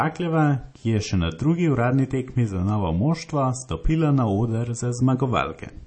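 Speech runs the whole clip with plainly audible MP3 compression damage, likely from a low-bitrate encode. Nothing survives above 8.4 kHz, a hard treble ceiling that fits about 32 kbps. Weak frequency lines drop in and out between frames. That leaves a watery, swirly texture.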